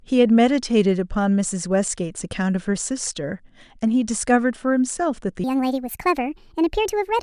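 From 5.44 s to the end at 7.22 s, the speech plays back too fast and high, a wrong sample rate fault: samples run out roughly 1.45 times quicker than captured, raising pitch about 6.5 semitones, which fits 22 kHz material played at 32 kHz.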